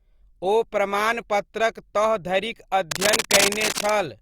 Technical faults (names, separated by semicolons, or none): cable scratch noise